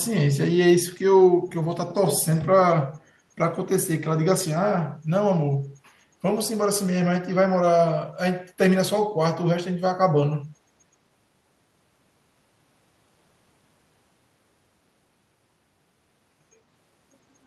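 From 1.88 to 2.21 s a copy of the speech trails the original by 87 ms, at about 10 dB below it, and a weaker burst returns from 2.37 to 2.42 s at about 20 dB down. This is echo leak, likely from a far-end loudspeaker whose echo canceller let part of the pickup through. It sounds like a doubling of the voice. A spectrogram shows fainter repeats of the speech harmonics offset 87 ms later, and the waveform shows matching low-level ghost envelopes.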